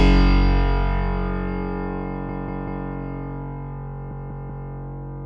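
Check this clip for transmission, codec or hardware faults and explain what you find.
Two stutters from repeated frames are audible. From 2.29 to 2.86 s and again from 4.11 to 4.69 s, a 192 ms slice plays three extra times. A run of compressed frames, which fits six frames, was duplicated, so the decoder replays it, adding 576 ms at each stutter.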